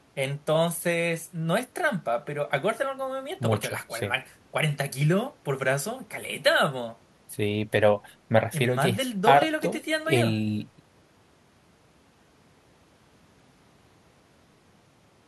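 No technical faults can be heard in this recording.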